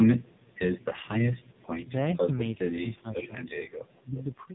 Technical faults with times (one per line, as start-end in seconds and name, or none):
0.00-4.54 AMR narrowband mobile codec
3.23-3.31 echo leak